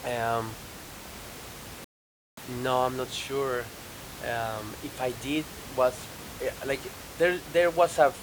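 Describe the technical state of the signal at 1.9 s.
At 1.9 s you're inside a rebuffering stall, from 1.84 to 2.37 s: the player ran dry, so the speech drops to silence for 0.53 s, then picks up exactly where it stopped.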